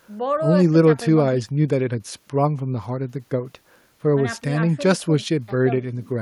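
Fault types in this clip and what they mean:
No technical faults can be heard in this speech recording. Nothing in it calls for a line of its own.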